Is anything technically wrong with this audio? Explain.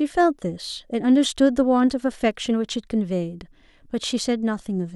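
No, nothing technically wrong can be heard in this speech clip. There is no fault to point to at any moment in the recording.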